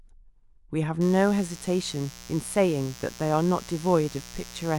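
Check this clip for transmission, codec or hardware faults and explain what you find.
There is one hardware fault here. Mains buzz runs from 1.01 s to the end of the speech. Sharp switching spikes, twice in each 60 Hz mains cycle, leak into the signal path, stacking harmonics up into the kilohertz range. The result is a steady, raspy buzz sitting roughly 20 dB below the speech.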